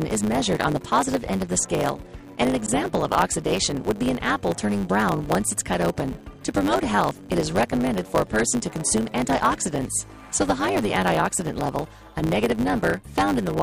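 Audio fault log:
Throughout: block size mismatch (truncated). There's a steady buzz at 100 Hz running under everything, and the whole thing plays about 1.09 times too fast while the timbre stays roughly where it should be. One stage hands over longer blocks than the next one takes, so the tail of each block gets chopped off. That leaves a tiny splice every 10 ms, which is the buzz, and losing that slice each time shortens the audio by about 8%.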